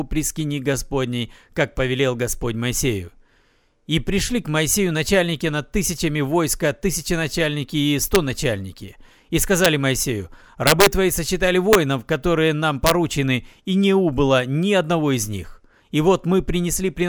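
Integer overflow cracks hit the speech at 8.15 s, 9.65 s, 10.67 to 10.86 s, 11.73 to 11.75 s, and 12.87 to 12.91 s. Loud peaks ran about 1 to 3 dB past the integer limit. They wrapped to the opposite sign instead of being limited. Each one gives a violent crack, harsher than clipping.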